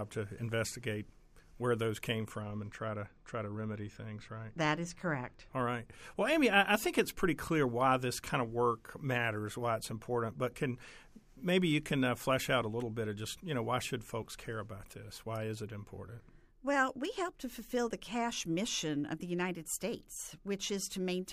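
From 2.42 s to 5.54 s, one channel runs late against the other by roughly 0.05 ms, which fits a lag of around two samples, and the two are then folded to mono. That summing produces channel delay (comb filtering): content shared by both channels cancels at evenly spaced frequencies, with the first notch near 10 kHz. With a delay this short, the effect falls on the top end, so the speech loses its upper brightness and sounds duller for those three seconds.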